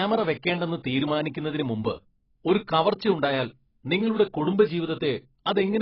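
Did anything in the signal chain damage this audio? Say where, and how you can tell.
Yes. AAC compression affects the whole speech clip. Nothing remains above about 5.6 kHz, and the damage is heavy. This points to the codec stage, likely an AAC-LC encoder running at a very low rate, consistent with something around 16 kbps. With so few bits available, the encoder quantises its frequency lines coarsely against its hearing model and pulls the cut-off down. Everything above that cut-off is discarded, and the remaining spectrum is thinned.

Clock slip clicks repeat from 0.16 s to 5.78 s as regular ticks roughly every 0.07 s, about seventy in all. That steady rhythm points to the converter or buffer stage, likely two devices running on independent clocks with no synchronisation, mismatched by roughly 300 ppm. Whenever the accumulated drift reaches one whole sample, a single sample is dropped or repeated. 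Each of those one-sample jumps in the waveform is heard as a tick.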